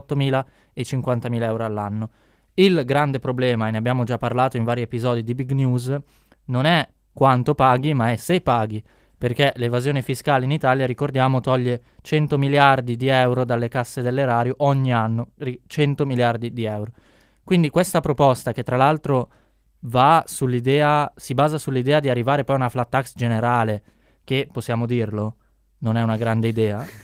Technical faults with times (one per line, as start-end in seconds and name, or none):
none